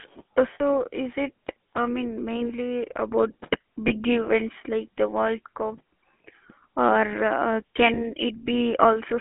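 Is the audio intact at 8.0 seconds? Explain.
No. From 7.94 to 8.01 s there are lost GSM frames. The decoder repeats the settings of the last good frame, which fits a single lost 20 ms frame, so the sound briefly holds as a rough, metallic ring. The whole clip also carries the GSM full-rate codec, which fits a 13 kbit/s coder. It keeps only a 200 Hz to 3.4 kHz band and adds plainly audible buzzy, gravelly roughness.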